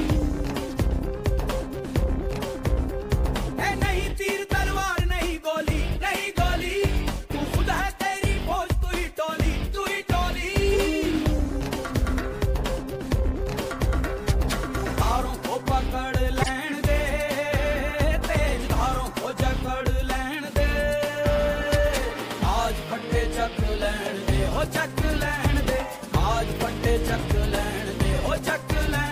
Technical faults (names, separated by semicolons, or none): corrupt frame decoded